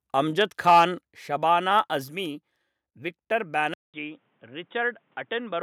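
From 0.41 to 0.84 s, the loudest syllables crackle harshly. This is microphone overload, likely from input gain set about 4 dB too hot, flattening about 4% of samples.

At 3.74 s, after a 200 ms silence, the input switched to a poorer device, likely. The sound turns dull and boxy, drops roughly 5 dB, and carries faint new background noise.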